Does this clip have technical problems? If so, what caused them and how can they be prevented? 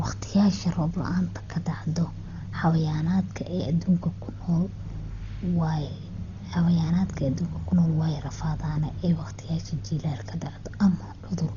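Yes. Throughout, the speech sounds dull, with nothing above 6.9 kHz and a rough, fluttering noise around tones. The likely cause is heavy Dolby Digital compression starved of bits, which fits a bitrate near 32 kbps. A plain low-pass filter would leave a clean band edge, but here the lines that get no bits are refilled with dither noise. Encoding at a much higher bitrate would prevent it.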